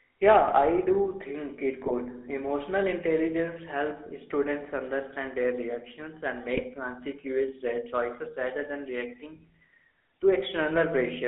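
GSM full-rate codec damage runs through this entire speech recording, a buzzy, gravelly roughness from pulse-driven vocal-tract modelling, band-limited to roughly 300 Hz–3.6 kHz, consistent with 13 kbps coding. GSM bit errors strike at 1.86–1.92 s, after "do think it", and 6.54–6.65 s, after "understand their reactions and", where corrupted filter, pitch and gain values produce brief squawks and gargling across a few frames.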